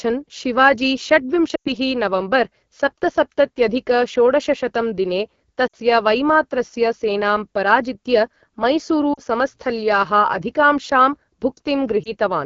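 Throughout, the speech has the rough, raspy texture of the AMR wideband (HD Voice) codec at one of its lowest rates, which fits 8.85 kbit/s. The vocal tract model struggles at that rate, so the damage is plainly audible.

Lost AMR speech frames interrupt it at 1.55–1.74 s (about 100 ms of audio, roughly five frames), at 5.67–5.76 s between "सप्तसप्तत्यधिक षोडशशतं दिने" and "वैमात्रस्य सेनां पराजित्य" (60 ms), at 9.13–9.21 s (40 ms), and at 12.03–12.12 s (one 20 ms frame). Each time, the decoder stretches the last good frame with falling gain, giving a warble or a brief fade.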